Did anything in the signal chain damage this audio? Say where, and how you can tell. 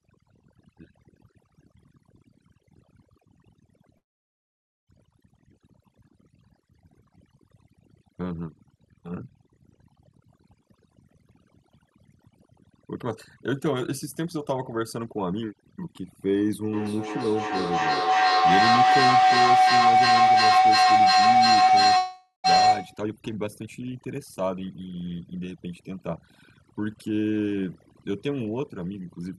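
Yes. At the call-processing stage, a noise suppressor set far too aggressively damages the whole clip. It pushes individual frequency bands down or off whenever they sit near its noise estimate. The quiet edges of the speech are removed along with the noise, so the background drops to near silence dotted with twinkling specks. This is overdone noise removal.

A long network dropout is the likely cause of two gaps. From 3.97 to 4.90 s, nothing arrives for about 0.9 s. The receiver briefly stretches the last sound into a fading buzz, then goes almost entirely silent before the speech resumes with that stretch missing. From 21.97 to 22.47 s, a second gap of about half a second is concealed the same way, with only a short silent portion.

A feedback howl runs from 16.72 to 23.07 s. Two devices in the same room on one call form a microphone-to-loudspeaker loop that gains level on every pass. 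The repeats narrow toward the frequency the loop favours, roughly 700 Hz, and pulse at roughly 0.3 s intervals, which matches the loop delay. At its peak the howl reaches about 10 dB above the speech, and it continues until the loop is broken.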